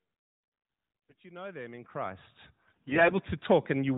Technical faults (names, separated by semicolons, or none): AMR bit errors